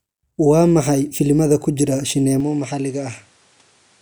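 Input switched to a poorer device at 2.40 s, lasting to the end of the clip. With no gap at the switch, the speech abruptly loses its top end, with nothing above 11.4 kHz, and turns duller. It also drops by a few decibels and sits over a new, faint noise floor roughly 35 dB beneath it. The likely cause is the system moving recording to a different, narrower-band microphone or headset mid-take.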